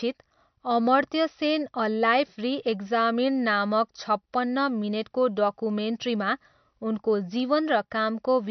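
MP3 compression runs throughout the speech, from start to finish, and is likely the cause of what is heard. Nothing survives above 6.1 kHz, so the top octave is simply missing and s sounds lose their crispness. The damage is plainly audible, which fits a low bitrate around 48 kbps. At that rate the encoder drops the upper band entirely and discards weaker frequency detail frame by frame, leaving a watery, swirling texture in the sound.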